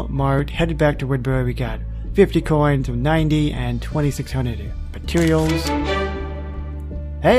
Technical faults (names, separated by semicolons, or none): none